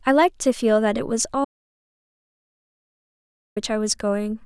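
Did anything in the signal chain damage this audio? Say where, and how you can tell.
Yes: audio dropout to silence, 1.45 to 3.56 s. The speech stops dead into silence, with no room tone, for 2.1 s, likely a lost input link.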